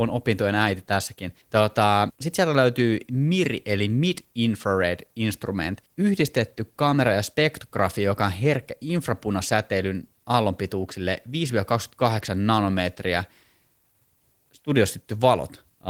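There are no technical faults to describe at any point in this speech clip.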